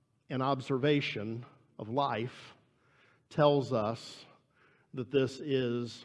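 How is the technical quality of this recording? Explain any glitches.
No technical glitches are audible anywhere in the speech recording.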